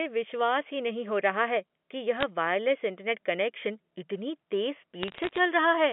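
Telephone-band speech, carried over G.711 mu-law with nothing heard above about 3.4 kHz, shows bit errors on a digital phone line: a short burst of sharp ticks at 2.21–2.23 s and a denser crackle from 5.03 to 5.39 s. The pattern fits an error rate of a few tenths of a percent. Each flipped bit corrupts a single sample, so the speech stays continuous underneath. That sets it apart from packet loss, which leaves gaps or smeared repeats instead.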